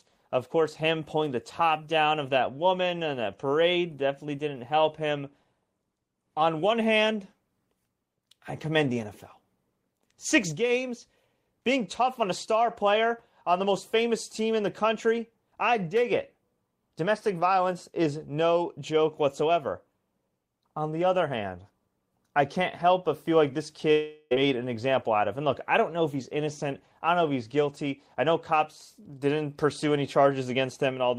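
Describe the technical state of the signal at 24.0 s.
At 24.0 s the signal is inside a long network dropout, 23.91 to 24.33 s, after "but feel like this": the receiver fills the gap with a fading buzz or hiss, likely from lost audio.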